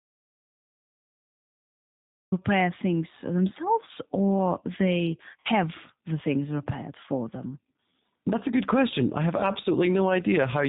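The clip opens in an audio dropout to silence lasting until 2.32 s, ending just before "repair things themselves or", likely from a lost input; the waveform is a flat line with no room tone.

Throughout, the G.729 codec leaves the speech plainly rough and synthetic. The spectrogram shows nothing above 4 kHz, which fits an 8 kbit/s low-rate codec.

At 5.40 to 5.47 s, between "things themselves or they" and "the things repaired for", VoIP packet loss concealed by the speech codec fills about 50 ms. The decoder stretches the last pitch and filter into a fading buzzy tone or coloured noise. On the spectrogram this appears as smeared, steady bands that decay.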